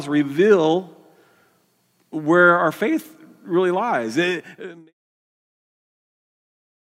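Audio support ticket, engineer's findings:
No fault found in the speech; the level fades out smoothly from around 4 s to 4.94 s with no click or hard edge, as an editor's fade would.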